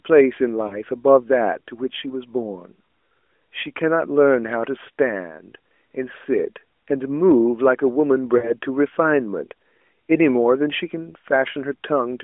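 Lost AMR speech frames occur at 0.68 to 0.76 s and again at 8.38 to 8.53 s. At each point speech frames failed their checksum, and the decoder filled the gap by replaying the last good pitch and vocal tract settings at falling gain. The first is a brief dip, consistent with a single 20 ms frame. The second lasts about twice as long, stretching and fading before the speech returns rough, all within the light band-limited character of the narrowband codec.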